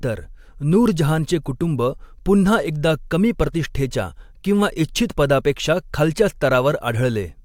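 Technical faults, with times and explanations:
No technical faults are audible anywhere in this speech.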